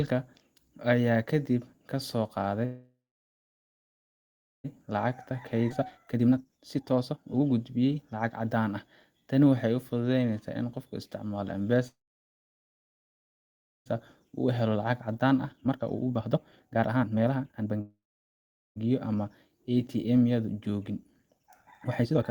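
Right after "ayaa kadib ka soo", at 2.65 to 4.66 s, there's a call audio freeze. It's likely that packets got held up, so the audio stalls for about 2 s, mostly silent, then resumes where it left off.

From 4.86 to 8.57 s a jitter buffer speed-up kicks in. The receiver trims tiny slices to burn off the backlog, so the speech runs at 130% speed with the same pitch and sounds hurried. Inside that, at 5.70 to 5.72 s, there's a skip ahead: roughly a second of speech is dropped and the two sides are spliced almost directly.

Another freeze hits at 11.88 to 13.88 s, 2 s of near silence, likely from delayed packets again. Then a speed-up at 14.25 to 17.80 s pushes things to 144%. A shorter freeze, likely from another late batch, follows at 17.81 to 18.78 s, with just under a second of mostly dead air. Finally, after "yadu joogin", the audio races at 152% from 21.38 s to the end.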